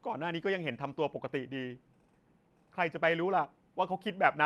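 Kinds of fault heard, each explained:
No fault can be heard in this speech clip. It has gone through a WebRTC call path whose band stops at about 12 kHz, which fits an Opus stream at around 32 kbps.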